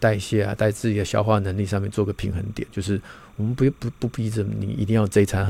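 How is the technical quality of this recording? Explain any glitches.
The recording has one fault, timecode bleed, running under the speech for the whole clip. Linear timecode from a neighbouring track or cable has leaked into the audio path. That code is a square wave flipping between two tones, around 1 kHz and 2 kHz, and its rhythm points to a 29.97 fps timecode feed. Sitting roughly 35 dB below the speech, it comes through as a faint but constant chirping warble behind the voice.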